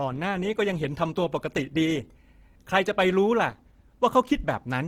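Throughout the speech, the sound is grainy and rough, with upper harmonics turned to a noisy hash instead of clean detail, though the full bandwidth is still present. This is likely Opus compression in its music (CELT) mode: at what fits a rate near 16 kbps, too few bits reach each band, so the encoder keeps band energy but fills the missing fine structure with folded or noise content, giving plainly audible texture damage.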